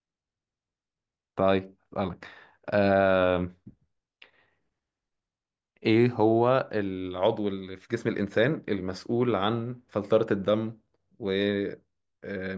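Nothing technical goes wrong anywhere in this bit of speech, so there's really nothing to flag.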